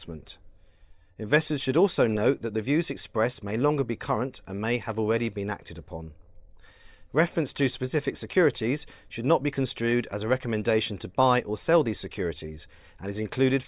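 No technical faults can be heard at any point in the speech.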